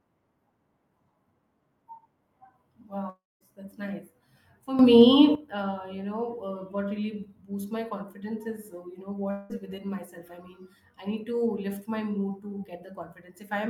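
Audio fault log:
3.09 to 3.43 s, long network dropout: the speech likely lost about a third of a second of packets. The last sound is stretched into a fading buzz for roughly 0.3 s, then near-silence, and the speech resumes further on with that stretch missing.
4.79 to 5.35 s, sudden gain jump: the level of the speech and the background noise together abruptly rises by about 12 dB with no ramp, likely a digital gain step applied between samples, before "uh you".
9.31 to 9.52 s, long network dropout: after "is uh you know" roughly 0.2 s of speech is likely lost in transit. The receiver fills the entire gap with a decaying buzz, no silence, and the speech jumps ahead to "within myself I mean".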